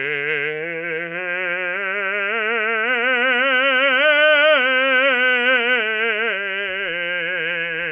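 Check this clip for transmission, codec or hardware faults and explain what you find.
No transmission, codec or hardware faults can be heard anywhere in this music clip.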